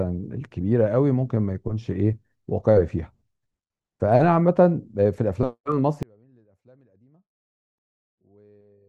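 From 6.03 s onward the speech falls about 33 dB to a faint trace, likely one channel inverted, cancelling the shared centre in mono.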